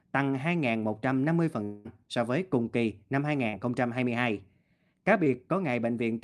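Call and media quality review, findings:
Long network dropout, likely cause, 1.63–1.87 s. About 0.22 s lost, filled by a fading buzz or hiss continuing the last sound, no true silence. Speech resumes after the gap.

Short concealed packet loss, 3.49–3.55 s and 5.25–5.28 s. Brief smears of roughly 40 ms and 20 ms where the jitter buffer extrapolated the missing audio, then blended back.

Call path is Opus with band limit near 12 kHz.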